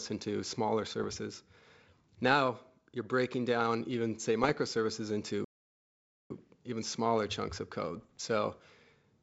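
Rough, popping bursts with brief jumps in level come at 1.00 to 1.15 s, just after "into smaller", and at 4.44 to 4.59 s. These are bit errors on an ADPCM link: flipped bits throw off the decoder's step size and predictor, so each error rings on briefly. From 5.44 to 6.31 s the speech cuts to silence for about 0.86 s, then resumes with "even smaller chunks of". This is a playback stall, likely from the player running short of data. The same crackling bit-error bursts return from 7.97 to 8.21 s, right after "even smaller chunks of".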